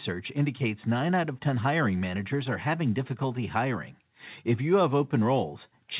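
No technical faults can be heard in the speech. It has the narrowband sound of a telephone call through a G.711 mu-law codec at 64 kbps, with nothing above 4 kHz.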